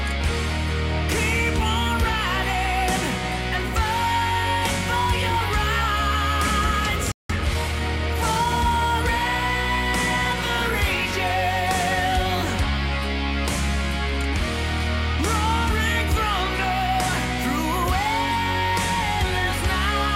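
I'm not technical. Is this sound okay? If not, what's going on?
No, there's a hiccup. At 7.12 s the sound cuts out for about 0.18 s, a playback stall, most likely because the player briefly ran short of incoming data or got held up, then picks up again at 7.30 s.

Right after that, from 7.30 to 8.48 s, you get time-compressed catch-up. The player hurries through the backlog at about 1.15 times normal speed by snipping out tiny pieces, so the pitch stays the same but it sounds rushed.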